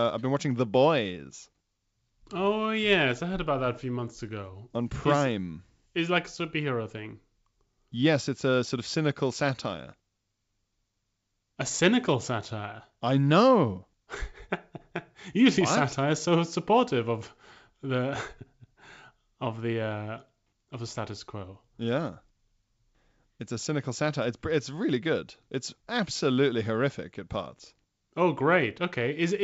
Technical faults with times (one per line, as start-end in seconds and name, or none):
none